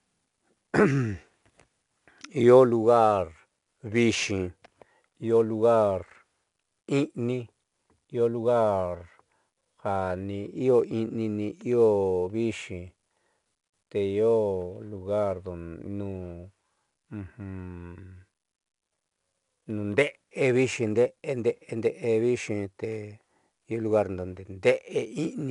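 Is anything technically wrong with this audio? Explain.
Yes. The speech carries 4-bit ADPCM compression damage for the whole clip. Each sample is coded as a coarse 4-bit step from a predicted value, with the step size adapting to the signal. The resulting error is broadband noise that rises and falls with the level, so the gritty hiss is plainly audible on louder passages. Nothing is present above 10.7 kHz, which fits a sample rate near 22 kHz and a data rate of roughly 89 kbps.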